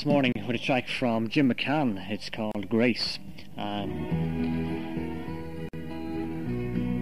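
Three short dropouts, at 0.32 s (30 ms), 2.52 s (32.5 ms) and 5.69 s (47.5 ms), are gaps at a join of encoded pieces: separately encoded segments were butted together untrimmed, so each encoder's start-up delay and final-frame padding leave silence. The sound cuts abruptly, its edges smeared, then resumes where it stopped.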